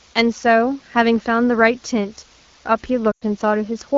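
From start to finish a low bit depth with dither fault lays a constant, even hiss about 30 dB below the speech, which fits samples reduced to roughly 8 bits with dither added before rounding. The rounding error becomes flat white noise rather than distortion, so a spectrogram shows a uniform grey floor across all frequencies and the waveform never settles to true silence.

From 3.11 to 3.23 s, lost AMR speech frames blank about 100 ms of audio, which fits five 20 ms frames. The AMR wideband decoder fills the gap by repeating its last good pitch and vocal-tract settings at falling gain, so the sound smears and fades before returning weak. On a spectrogram the harmonics stretch flat and dim. In the waveform the envelope shrinks, then recovers.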